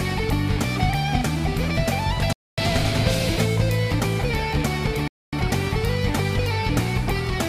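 At 2.33 s and again at 5.08 s, the sound stops dead for 250 ms. Each is a gap between chunks. The audio arrives in 2.5 s pieces, and silence sits at each join. Nothing is lost, but holes interrupt it.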